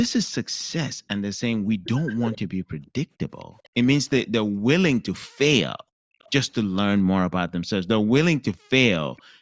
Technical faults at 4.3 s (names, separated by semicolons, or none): none